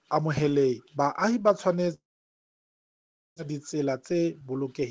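Long network dropout, 1.94 to 3.40 s: the last sound trails off into 1.36 s of silence, then audio returns with 0.78 s missing, likely from stalled packet delivery.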